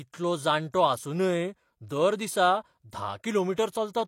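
Pre-echo at 3.56 s: the transform codec spread quantisation noise across its block, so a short hiss of about 18 ms leaks ahead of the sharp speech onset.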